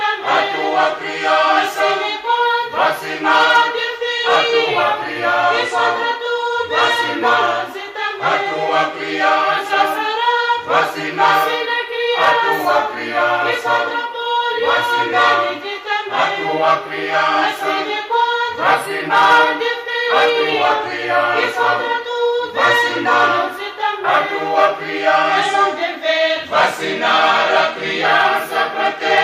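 Nothing is technically wrong with this audio; no faults can be heard anywhere in it.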